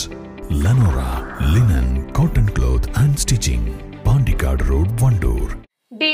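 Nothing in the clip stood out as a problem on listening.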